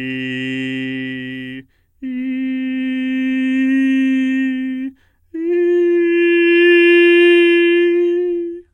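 A music clip whose quality falls suddenly at 5.82 s and stays degraded to the end. This is an adaptive stream at a lower bitrate: the player switched versions mid-play, which fits a move from 96 kbit/s AAC-LC to 16 kbit/s HE-AAC, probably because the connection slowed. Nothing sounds above 11.6 kHz, and codec artefacts thicken. Unlike a buffering dropout, there is no gap or stall, and unlike a simple low-pass filter, artefacts rise along with the treble loss.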